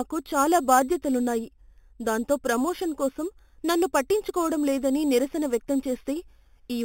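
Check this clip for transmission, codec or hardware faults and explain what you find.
There's one fault, running the whole clip: imaging from sample-and-hold upsampling. The speech was raised from what sounds like an 8 kHz rate by repeating samples unfiltered, leaving a mirrored copy between 4 and 8 kHz, about 17 dB down, heard as a metallic fizz tracking the speech.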